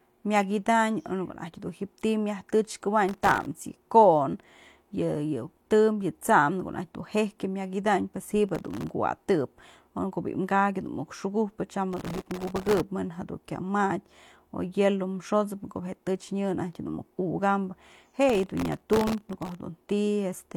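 Speech carries four bursts of gritty crackle riding over it, at 3.09–3.46 s, 8.49–8.94 s, 11.93–12.81 s and 18.29–19.58 s. This is processor overload crackle. The processor repeatedly failed to finish its audio buffers on time, and each miss let a fragment of old audio play with hard edges. The grain points to buffers of under a millisecond. The 11.93 s burst packs in the most misses, well over a hundred.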